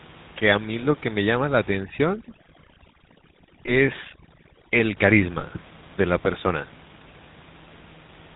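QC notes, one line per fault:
Throughout: GSM full-rate codec. The whole clip has that buzzy, gravelly grain of early mobile calls, and it's plainly audible. The codec rebuilds the vocal tract from a short filter and feeds it a sparse train of regularly spaced pulses, so the natural breathiness gets swapped for a coarse, rasping buzz. Nothing above 4 kHz survives, which leaves everything a bit boxed-in. The texture fits a 13 kbit/s full-rate stream. The room noise sits about 24 dB under the speech.
3.66–3.73 s and 5.40–5.44 s: lost GSM frames. Each spot has a brief rough, metallic ring where the speech should carry on. The decoder didn't get a usable frame, so it reused the settings from the last good one. That held-over filter and pulse pattern is what gives the clanky, tonal smear. Both gaps sound short enough to fit a single 20 ms frame, so the fill never fades all the way to silence.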